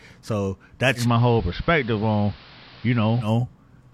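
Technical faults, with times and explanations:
0.95–3.32 s, digital radio blending to analogue: the receiver loses the digital stream and cross-fades over about 120 ms to the station's AM broadcast, returning to digital at the end. While on AM the speech is band-limited, losing treble, so it sounds duller. A steady hiss sits roughly 25 dB below the signal, and the level drops by about 1 dB, because the analogue path carries narrower audio, more noise and slightly different gain.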